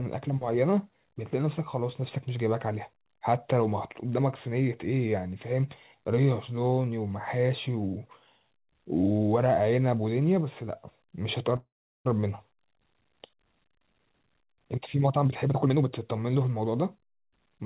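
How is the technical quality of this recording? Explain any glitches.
The recording has two audible glitches, a stall and then a rushed stretch near the end, and the whole call sounds narrowband, with nothing above 4 kHz.

From 11.56 to 12.08 s there is a call audio freeze. The sound is held as a fading buzz, then drops to near silence for most of about half a second before resuming exactly where it left off. The likely cause is packets held up in transit, which drained the jitter buffer while the receiver stretched the last sound. On a waveform this shows as a decaying tail followed by a flat gap. On a spectrogram it shows as smeared, repeated harmonics fading into a blank band, with nothing lost afterward.

From 15.24 to 17.57 s, a jitter buffer speed-up makes the speech run at about 116% of normal speed while the pitch stays the same, so it sounds hurried. After the delay built up, the receiver trimmed many tiny pitch-period slices, around 0.4 s in total, to catch up. 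A spectrogram shows compressed syllable spacing with unchanged harmonic heights, and the waveform looks slightly denser in that span.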